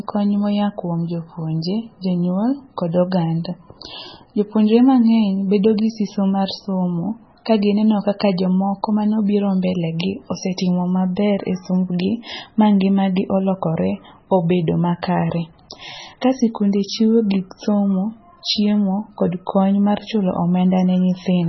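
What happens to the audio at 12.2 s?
At 12.2 s the speech carries the same MP3 compression damage heard through the whole clip. The encoder was starved of bits, which fits a bitrate around 16 kbps, so it discarded everything above 5.9 kHz and zeroed weaker frequency lines that blink on and off between frames. The result is heavy, watery, swirling speech with dulled sibilants and smeared consonant attacks. On a spectrogram a flat ceiling sits at 5.9 kHz, with patchy holes beneath it, most likely from low-rate MP3 coding.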